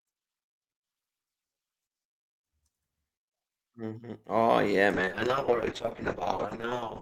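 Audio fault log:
4.94 to 7.02 s, call bitrate drop: the speech turns rough and muffled through to the end, its top end narrowing from 20 kHz to 8 kHz. The call's bandwidth estimate fell, so the encoder coded far more coarsely, which fits a fall from about 48 to 7 kbps.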